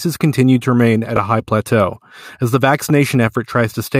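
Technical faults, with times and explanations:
1.16–1.18 s, chunks out of order: after "continue to remain at", a 10 ms chunk plays one chunk late, swapping places with its neighbour before "a high plateau as". Nothing is lost, but three hard joins produce a brief jumbled stutter.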